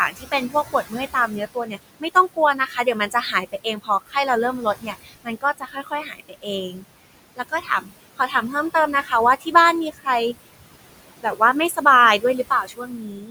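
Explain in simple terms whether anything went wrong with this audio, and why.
Noise suppressor artifacts run through the whole clip. The filter pushes the room's background noise far down between phrases, so it ducks away in the gaps and returns under the speech. That pumping is unlike steady room noise, which would stay level.

Speech cut by the noise suppressor happens repeatedly, at 0.1 to 4.16, 4.61 to 6.84, 7.36 to 9.55, 9.91 to 10.07, 11.18 to 11.86 and 12.19 to 13.3 seconds. Here the filter mistook quiet parts of the speech itself for noise, so soft sounds and word endings come out swallowed or faint, about a second and a half of it in the first stretch alone.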